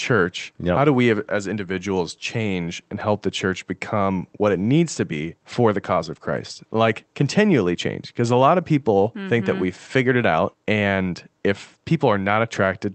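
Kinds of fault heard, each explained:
Nothing here counts as a fault: the speech just carries the ordinary character of a call line, with the top end stopping at around 8 kHz as that kind of path does.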